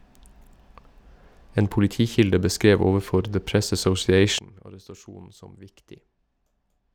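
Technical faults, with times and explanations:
4.39 to 6.95 s: sudden gain jump, speech and background noise dropping together about 20 dB instantly, not fading, likely an unramped gain change.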